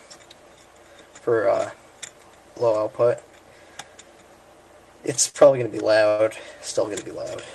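At 5.29 s there's a short stall from a late packet: the jitter buffer ran dry, so the last bit of sound gets stretched for about 45 ms until the packet turns up, then it picks up where it left off. You hear a held sound with a faint buzz or dip, nothing lost.

Then from 6.08 to 6.22 s there's a call audio freeze. The sound hangs as a fading buzz or hiss for roughly 104 ms without going fully silent, then resumes with nothing skipped. The likely cause is packets held up in transit emptying the jitter buffer again, with each stall adding delay.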